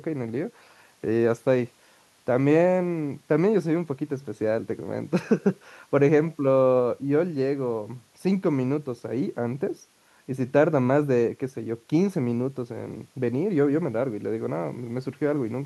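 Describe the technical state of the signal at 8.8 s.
At 8.8 s the speech signal is intact, with no audible technical fault at that moment.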